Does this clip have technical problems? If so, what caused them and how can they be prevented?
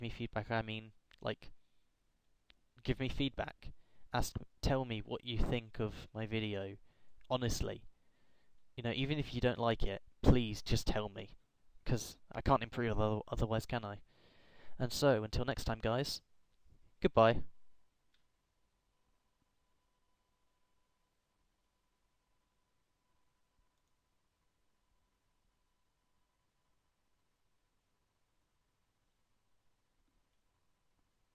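No, no technical faults audible.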